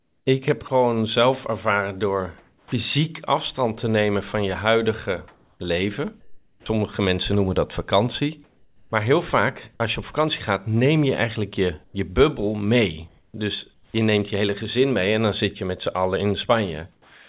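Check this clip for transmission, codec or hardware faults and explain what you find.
The clip shows repeated discontinuous-transmission faults, all likely caused by the sender's voice activity detection. The audio has no content above 4 kHz, which points to a narrowband codec such as G.711.

Comfort noise in place of the background occurs from 0.0 to 0.7 s, 5.28 to 6.66 s and 8.44 to 8.92 s. In these pauses the sender likely stopped transmitting, and the receiver generated synthetic noise. The real background gives way to a flat, featureless hiss, which is about 5 dB quieter in the 8.44 s gap.

Sound dropped by the voice detector occurs at 0.68 s (about 20 ms), from 2.38 to 2.72 s (about 130 ms of speech lost) and from 16.92 s to the end (about 160 ms lost). Speech was classified as background and not sent, so it is replaced by steady noise or near silence until transmission resumes.

Onset clipped by the voice detector occurs from 6.6 to 6.66 s. 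The detector was slow to register that speech had restarted, so the first 60 ms went untransmitted and were filled with comfort noise. The speech begins abruptly, without its natural soft attack.

Sound chopped by the voice detector runs from 11.84 to 13.94 s. The detector toggled between sending and muting more than once, replacing about 560 ms in total. The speech has two or more holes.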